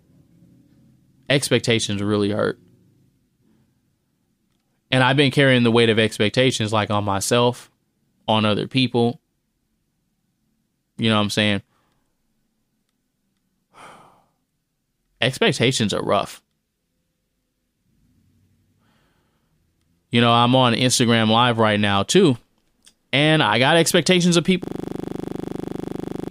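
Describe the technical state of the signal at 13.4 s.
At 13.4 s the speech signal is intact, with no audible technical fault at that moment.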